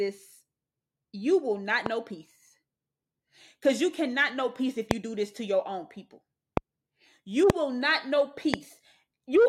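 Loud pops at 1.86 s (after "will not"), 4.91 s, 6.57 s (after "to your own people"), 7.50 s and 8.54 s (after "will not know"): single sharp clicks, about 0.02 s long and roughly 15 dB above the speech for the first and 20 dB for the rest, with the speech continuing underneath. Each is likely a voltage spike from a switch, plug or static.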